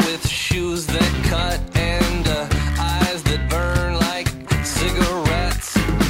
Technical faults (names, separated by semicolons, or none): none